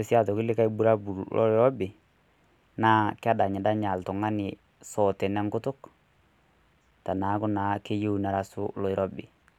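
No technical faults turn up anywhere in the recording. The speech runs without any interruption or disturbance.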